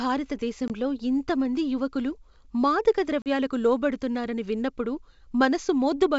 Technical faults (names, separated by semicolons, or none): packet loss on an ADPCM call